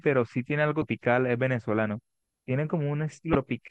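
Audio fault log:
0.79–0.82 s and 3.32–3.35 s: damaged data in a compressed stream. The decoder misreads corrupt frames, producing 32 ms glitches seen as abrupt waveform breaks.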